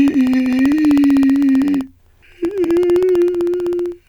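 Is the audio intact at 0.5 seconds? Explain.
No. At 0.5 seconds the music sits inside a run of periodic USB or driver dropouts lasting from 0.08 to 3.99 s. Every 64 ms something stalls the audio path, and roughly half a millisecond of signal is replaced by silence, about seventy times in all. It is heard as a steady ticking riding on the music. A waveform shows tiny evenly spaced notches dropping to near silence, and a spectrogram shows thin vertical broadband lines at the same spacing.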